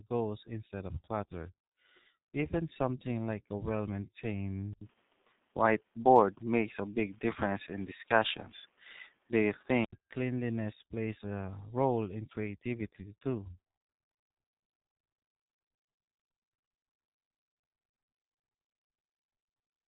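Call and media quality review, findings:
G.723.1 codec, whole clip. Speech muffled and hoarse, consonants smeared, heavy codec damage. Nothing above 3.9 kHz. Consistent with the 6.3 kbit/s mode: 30 ms frames and a slowly updated voice model that cannot track fast articulation, plus a hard band limit under 4 kHz.

Input switched to a poorer device, 4.73 s to 9.93 s, starting just before "cleanliness plays". Likely cause: mid-call switch to a lower-grade microphone or headset call profile. Short dropout of about 80 ms at the switch. Band narrows further to 3.8 kHz, tone turns duller, level shifts by a few dB, and a new noise floor appears, roughly 40 dB under the speech.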